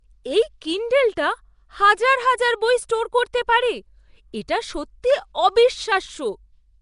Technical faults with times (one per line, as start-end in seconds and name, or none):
0.00-6.81 Nellymoser compression